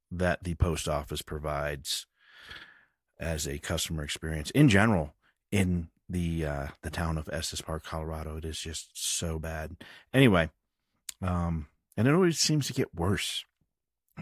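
No technical faults can be heard anywhere in the recording.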